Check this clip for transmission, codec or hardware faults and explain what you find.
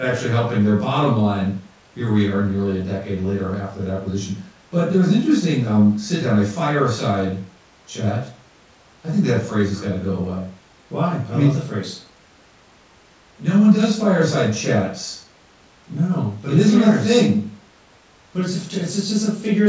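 Nothing stood out on listening to this speech recording that would point to a transmission, codec or hardware problem.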